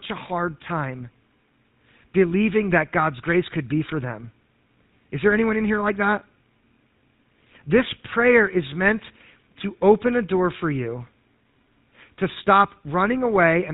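Throughout, the speech sounds buzzy and gravelly and cuts off at 4 kHz. This is GSM full-rate codec damage, from sparse pulse excitation, which fits a 13 kbps stream.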